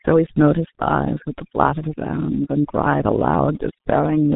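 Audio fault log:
throughout, overdone noise removal: The background drops away and breaks up into twinkling specks. A noise reduction stage was set far too hard. It pushes individual frequency bands down or out entirely whenever they sit close to its picture of the noise. Quiet parts of the speech are caught in that net and vanish with the hiss. Isolated bands that escape flicker on and off as the specks.
throughout, G.723.1 codec: The speech is muffled and hoarse, and consonants smear together. Nothing is left above 3.8 kHz, so the brightness and crispness of the sound are gone. The coding damage is heavy, which fits the roughly 6.3 kbit/s rate of G.723.1. This early internet-telephony codec works in 30 ms frames. It updates its model of the voice slowly, so fast changes in the speech blur into a rough, dull texture.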